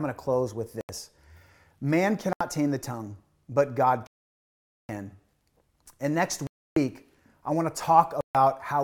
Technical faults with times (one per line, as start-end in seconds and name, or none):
0.81-0.89 Bluetooth stall
2.33-2.41 Bluetooth stall
4.07-4.89 Bluetooth stall
6.47-6.76 Bluetooth stall
8.21-8.35 Bluetooth stall